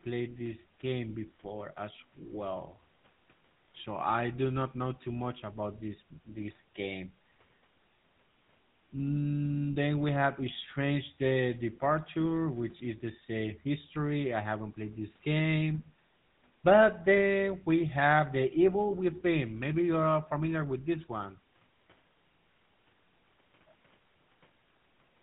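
Speech, with GSM full-rate codec damage running through the whole clip. Everything above 4 kHz is gone. The voice has a buzzy, gravelly roughness from pulse-driven vocal-tract modelling, which fits a 13 kbps GSM full-rate path. Faint room noise sits about 41 dB below.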